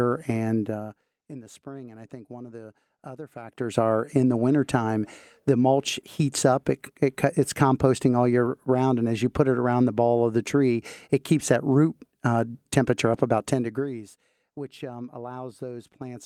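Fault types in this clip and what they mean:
Zipper noise: a gain change of around 20 dB is applied in unsmoothed 1 dB jumps, at about 50 steps a second, instead of as a continuous ramp. Each jump leaves a tiny discontinuity in the waveform, so between 3.36 and 3.78 s the speech carries a fast ticking, zipping texture that rides on the level move and stops once the gain settles.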